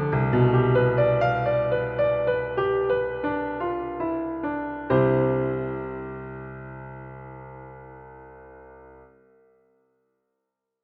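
No technical faults can be heard in this audio.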